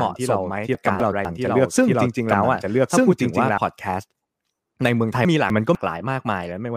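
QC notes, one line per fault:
0.00–3.58 s, doubled audio track: a second full-band copy runs about one second behind at roughly equal level, then cuts off abruptly; likely a duplicate capture path or misaligned edit.
0.75–1.25 s and 5.25–5.75 s, chunks out of order: two 250 ms chunks swap places, so the sound jumps back and forth, with three hard joins in each.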